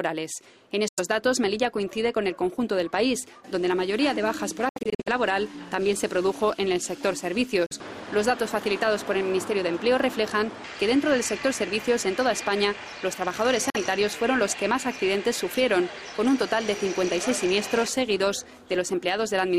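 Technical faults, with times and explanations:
0.88 to 1.00 s, 7.66 to 7.73 s and 13.70 to 13.77 s, Bluetooth dropout: packets likely failed to reach the headphones in time and were discarded, so the output falls silent for about 93 ms, then twice for about 46 ms. The sound resumes further along, as though it had kept playing.
4.69 to 5.08 s, Bluetooth dropout: the link likely stutters, so short holes are scattered across about 370 ms, about 230 ms missing in total and the longest single gap about 70 ms, giving a choppy, broken stretch.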